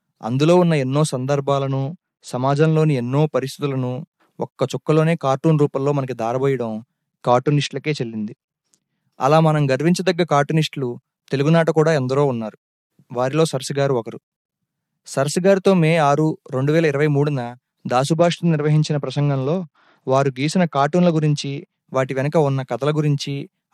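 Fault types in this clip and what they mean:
Bluetooth SBC bit pool drop: A congested link starved the codec of bits. Top sub-bands got few or no bits and the rest were coarsely quantised. At 1.61–2.75 s, 7.30–9.01 s and 18.12–21.79 s the speech turns dull and gritty. This fits a bit pool falling from 28 to 10, near 84 kbps.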